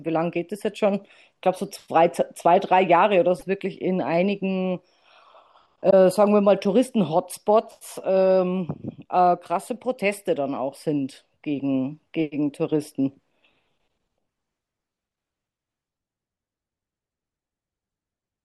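At 3.38 to 3.43 s, and again at 5.89 to 5.94 s, the speech skips ahead and leaves a short garbled blip of about 44 ms. That's likely a broken MP3 bit reservoir. Frames went missing, so the next one reached back for borrowed data and decoded bytes from the wrong frame. The blip spans under two frames, which fits frames of about 26 ms.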